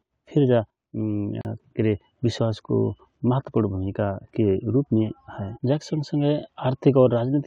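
The speech in this clip was encoded as separate pieces and then joined without trimming, so the encoder's start-up silence and the padding on the last frame of the earlier piece both remained at the seam. The result is a gap at a join of encoded pieces: from 1.41 to 1.45 s, a hole of about 36 ms opens in the speech, its edges smeared by the codec, and the voice then resumes exactly where it broke off.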